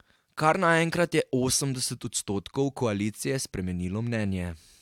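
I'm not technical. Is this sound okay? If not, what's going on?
Yes, I listened to this speech recording and nothing stood out as a problem.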